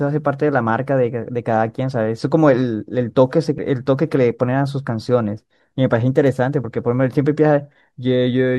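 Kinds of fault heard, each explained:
Damaged data in a compressed stream: at 3.58 s and 6.63 s, corrupted bytes in the encoded speech make the decoder misread the affected frames and lose sync while it hunts for the next valid frame header, leaving a brief glitch in the audio at each point.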